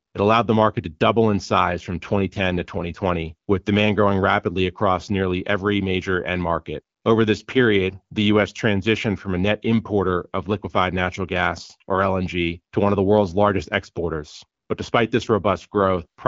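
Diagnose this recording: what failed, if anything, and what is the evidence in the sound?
AMR rate drop, network and codec stages. From 1.94 to 3.06 s, between "to double in size" and "with demand growing rapidly", speech turns rougher and more synthetic. It recurs from 15.27 s to the end. Bandwidth holds, with no gap. This fits AMR-WB stepping from 12.65 to 8.85 kbit/s on a weak link.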